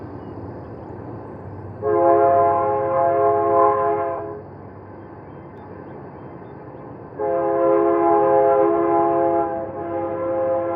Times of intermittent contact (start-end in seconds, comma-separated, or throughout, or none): none